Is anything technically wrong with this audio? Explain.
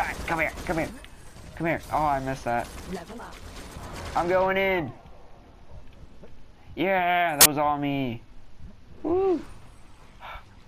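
Yes. Compressed frames were skipped twice, at 3.18 s and from 7.41 to 7.46 s. Whole blocks of the encoded stream never reached playback, either because they were missing from the file or because the decoder rejected them as corrupt, so the sound jumps forward by about 50 ms at the first point and about 20 ms at the second. At each join you hear a small lurch in continuity.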